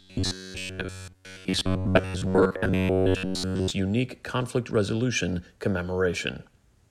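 From 0.01 to 3.71 s, before "unique conflict resolution", robotic sound from repeated short buffers: a rigid metallic 93.8 Hz buzz, likely from looping roughly 11 ms chunks over most of the audio.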